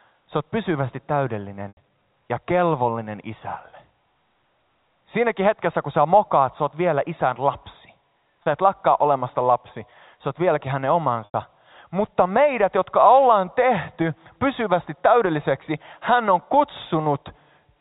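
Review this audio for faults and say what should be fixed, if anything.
Packet loss with pitch repetition occurs at 1.68 s (90 ms, before "ja kelvollinen"), 8.43 s (30 ms, after "oot vielä isän lapsi") and 11.25 s (90 ms, after "sä oot vieläkin hänen"). The receiver loops the last pitch cycle, so the 30 ms gap sounds like a brief buzzy hold, while the 90 ms gaps fade into silence before the speech returns with a short cross-fade. Jitter buffering or forward error correction would prevent it.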